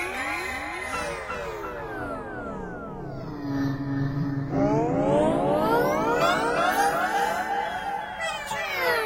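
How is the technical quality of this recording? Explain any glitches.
There is one glitch, a stretch of crude rate conversion.

Crude rate conversion runs from 5.88 to 7.94 s. The sample rate was changed, which fits a 44.1 kHz to 48 kHz step, by linear interpolation between neighbouring samples with no anti-aliasing filter. That leaves a patterned error sitting roughly 35 dB under the sound. It is heard as a gritty, inharmonic fizz that clings to the louder and brighter moments.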